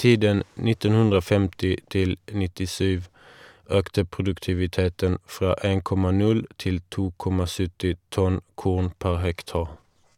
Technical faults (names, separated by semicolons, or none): none